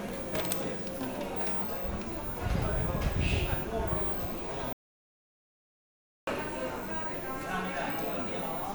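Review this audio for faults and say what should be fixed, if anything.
The input signal was likely lost, through a dropped connection or a stray mute, while the recorder kept writing silence. This is an audio dropout to silence: from 4.73 s to 6.27 s the sound cuts out completely, leaving about 1.5 s of silence with no background, before resuming mid-flow. Securing cables and links and monitoring input levels during capture would prevent it.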